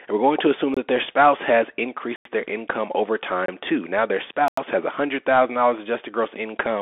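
A narrow, telephone-like speech recording runs the whole way through the Bluetooth CVSD headset codec. The sound sits in a band of roughly 250 Hz to 3.5 kHz with nothing above 3.7 kHz, and carries a granular hiss, scratchy s sounds and gritty distortion on louder bright passages. CVSD sends a single up-or-down bit per sample, and its adaptive step cannot keep pace with fast, loud changes in the waveform. Four hard dropouts also cut through the audio, each a block of digital silence where the signal cuts out abruptly and returns without a fade. Short holes appear at 0.74 to 0.77 s, right after "we're going to assume", and at 3.46 to 3.48 s, just after "their income over". Each lasts about 23 ms, which fits a 1024-sample buffer. Longer gaps of about 93 ms fall at 2.16 to 2.25 s, between "that their spouse has" and "their income over", and at 4.48 to 4.57 s. These fit a 4096-sample buffer. 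The likely cause is output buffers that were not filled in time.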